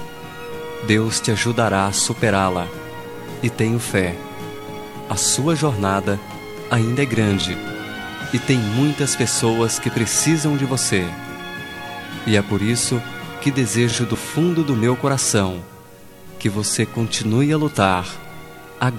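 No technical faults can be heard anywhere in the recording. Nothing drops out, breaks up or distorts at any point.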